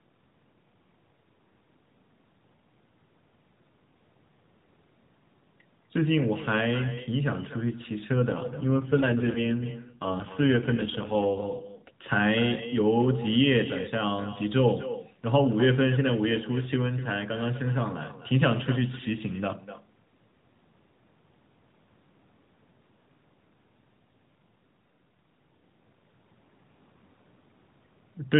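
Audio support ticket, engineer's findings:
Echo with no canceller, whole clip: every phrase followed by a quieter, thinner copy about a third of a second later, about 14 dB down. Far-end loudspeaker feeding its microphone, echo returned over network round trip, no cancellation at far end.

AMR rate drop, 8.16 to 11.91 s: sound turns rougher and more synthetic, band unchanged, no gap. Link-adaptation step from 12.2 to 5.9 kbps, fewer bits for the vocal-tract model; quality recovers once the normal 12.2 kbps AMR-NB narrowband mode resumes.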